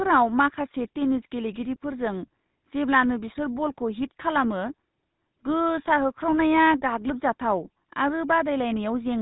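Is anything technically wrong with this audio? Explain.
Yes. The speech carries GSM full-rate codec damage that is plainly audible throughout. The codec models the vocal tract and drives it with sparse, regularly spaced pulses, which fits a 13 kbps bitrate. The result is a buzzy, gravelly roughness. On a spectrogram, energy stops abruptly at 4 kHz and the harmonics look grainy and smeared.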